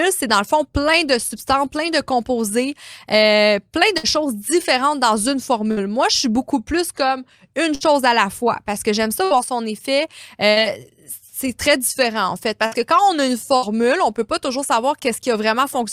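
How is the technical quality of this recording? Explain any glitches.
The speech is interrupted by seven bursts of packet loss, at 3.97, 5.71 (after "choses différentes dans une"), 7.75 (between "beaucoup plus comme une" and "à la fois parce"), 9.24, 10.51, 12.66 and 13.56 s (between "on a une" and "on peut pas toujours"). At each point about 60 ms of audio never arrived. The receiver stretched the last sound for roughly 55 to 60 ms, fading it, so you hear a brief held buzz or hiss rather than silence or a click. The speech then resumes with that stretch missing.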